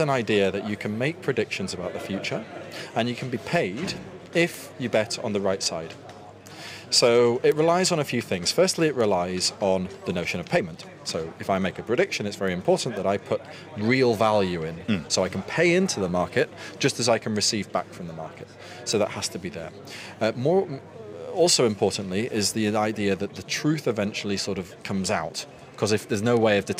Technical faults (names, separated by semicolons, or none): word clock ticks